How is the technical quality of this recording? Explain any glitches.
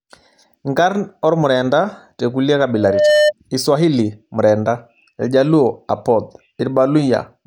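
The recording has one clear technical problem. Loudspeaker feedback squeal runs from 2.74 to 3.33 s, just after "ormurenda tekulie". The microphone was picking up the loudspeaker it fed, and at 602 Hz the loop gain rose above one, so that frequency kept recirculating and growing on its own. It is heard as a pure tone swelling over roughly 0.4 seconds into a squeal that peaks around 5 dB louder than the speech, then stops.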